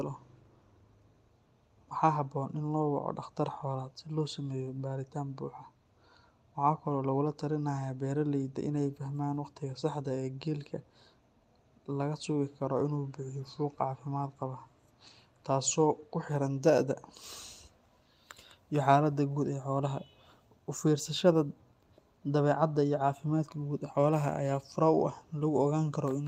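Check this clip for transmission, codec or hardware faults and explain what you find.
Nothing here points to a transmission, codec or hardware fault; the speech just comes across the way you'd expect from an ordinary call connection.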